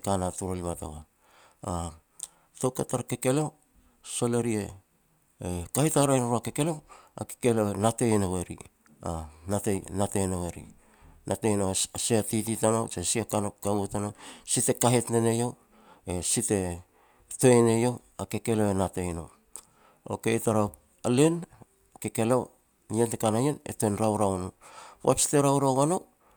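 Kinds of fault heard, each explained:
No technical fault can be heard anywhere in the speech recording, with the signal staying continuous and steady throughout.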